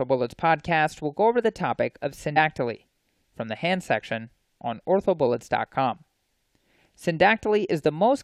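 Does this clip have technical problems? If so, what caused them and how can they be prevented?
Yes. At 2.36 s the speech is broken by a brief glitch from damaged data in a compressed stream. Corrupted bytes made the decoder misread a frame and resynchronise at the next header. Verifying checksums on transfer and storage, and using a container with error detection, prevents it.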